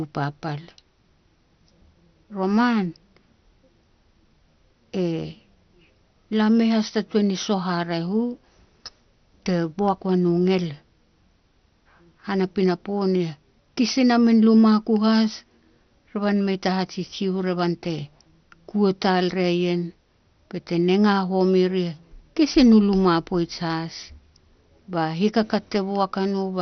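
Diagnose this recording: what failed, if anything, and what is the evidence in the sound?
Dull, gurgling and granular from start to finish, with the speech band-limited to nothing above about 6.2 kHz and the upper bands flickering in and out. That pattern points to the codec stage, likely heavy MP2 compression at a low bitrate, around 48 kbps. MPEG Layer II divides the signal into 32 equal sub-bands and shares out bits among them. Starved of bits, it switches off the top bands entirely and quantises the survivors coarsely, producing the watery distortion.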